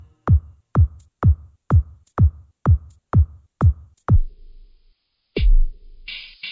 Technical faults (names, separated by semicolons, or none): wrong sample rate